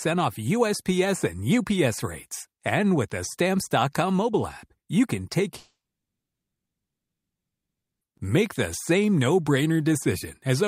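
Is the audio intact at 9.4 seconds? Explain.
Yes, at 9.4 seconds the audio is intact, with no dropout, click, distortion or other fault in the sound at that moment.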